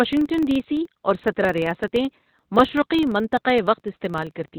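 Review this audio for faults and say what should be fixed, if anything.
Opus compression, likely in its narrowband SILK speech mode at a rate that fits roughly 12 kbps, leaves the speech muffled and hoarse throughout, with nothing above about 4 kHz. Encoding at a higher bitrate so the codec stays in full-band mode would prevent this.

A filter restarted on every block resets its state at each boundary, consistent with a 2048-sample block. It adds a steady 23.4 Hz buzz throughout that follows the speech level. Carrying the filter state across blocks instead of starting each one from silence would prevent this.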